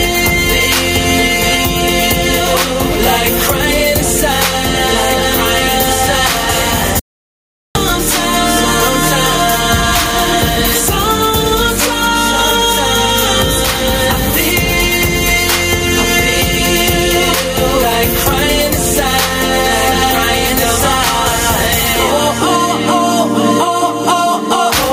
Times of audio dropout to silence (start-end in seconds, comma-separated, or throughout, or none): 6.99-7.75